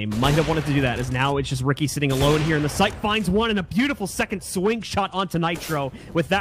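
No technical faults are audible.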